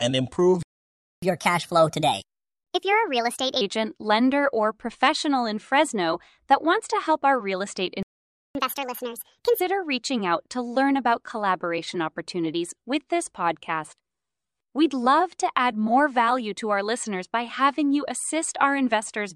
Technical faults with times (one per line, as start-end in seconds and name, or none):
0.63-1.22 playback stall
1.22-3.61 catch-up at higher speed
8.03-8.55 playback stall
8.55-9.60 catch-up at higher speed